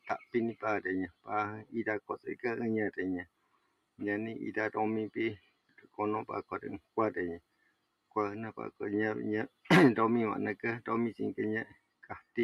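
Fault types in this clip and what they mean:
Noise suppressor applied to music or sounds: a suppressor designed for speech stays active across the whole clip and treats sustained, steady material as noise to be removed. Its gain moves over a range of around 20 dB, so the level rises and falls with the content rather than with any mix decision. Sharp onsets pass fairly intact, while held and decaying parts are pulled down, giving a pumping, unsteady quality to the sound.
Sound cut by the noise suppressor: at specific stretches the suppressor clamps down harder than elsewhere, dropping the affected sound by about 20 dB at its deepest. This happens at 0.00–2.44 s, 3.25–4.01 s, 5.38–8.16 s, 9.48–9.69 s and 11.66–12.37 s, with roughly a second and a half lost in the longest span. Sustained portions and decays sink or are cut short, while transients largely survive.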